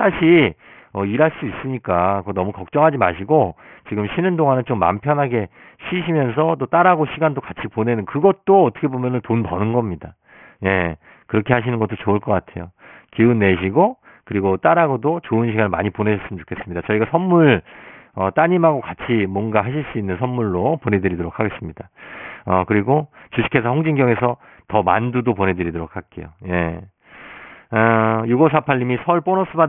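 Aliasing runs through the whole recording. The speech was taken down to a much lower sample rate without an anti-aliasing filter first, and the band stops hard at 3 kHz, which fits a rate of about 6 kHz. Content above that edge folds back down to unrelated frequencies, sitting at roughly 20 dB below the signal. Sibilants come out gritty and metallic instead of simply dull.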